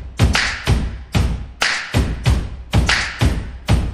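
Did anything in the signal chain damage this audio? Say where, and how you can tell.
Yes. The damage is at the codec stage: MP3 compression through the whole clip, plainly audible as a watery, swirly texture with smeared attacks. A spectrogram shows weak components flickering between frames, likely from a bit-starved encode around 64 kbps.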